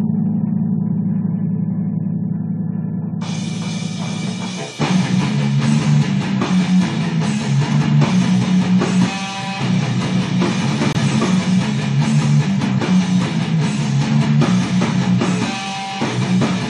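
A corrupt frame muted fault occurs at 10.93 s, where the audio drops abruptly into silence until 10.97 s. The 40 ms gap is consistent with two consecutive compressed frames of about 20 ms each being damaged. The decoder rejected them as unreadable, and the player substituted silence for their full duration. The cut-in is sudden rather than faded, and the sound resumes on schedule afterwards, so the clip's timing is preserved.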